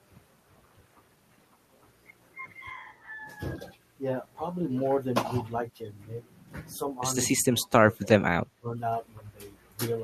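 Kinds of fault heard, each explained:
Speech suppressed in double talk: the speech briefly dips around 5.6 s, then from 7.5 to 8.8 s, the later drops deep, likely an echo canceller ducking overlapping talk.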